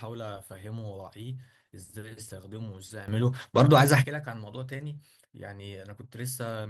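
A speech clip where, at 3.08 s, the level jumps by about 13 dB in one step, background and all, and stays up until 4.04 s. That's a sudden gain jump, likely a gain setting applied with no ramp. The Opus coding shows only light traces.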